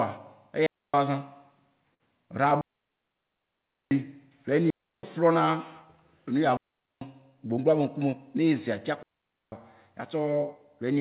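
A digital wireless dropout opens the sequence at 0.66 to 0.94 s: the link lost too much data, and the receiver muted with a very short fade, leaving a clean 273 ms hole of near silence with no noise burst on either side. At 1.94 s a short stall from a late packet follows. The jitter buffer ran dry, so the receiver stretched the last sound for 58 ms until the packet arrived, then carried on from the same point. Nothing is lost, but the sound hangs slightly too long. Further dropouts of the same clean, noiseless kind cut out 2.61 to 3.91 s (1.3 s), 4.70 to 5.03 s (330 ms) and 6.57 to 7.01 s (444 ms). From 7.49 to 8.13 s a jitter buffer speed-up trims about 50 ms of excess buffered audio in pitch-period-sized pieces, so the speech runs at 108% speed, hurried but unchanged in pitch. A final dropout mutes 9.03 to 9.52 s (494 ms).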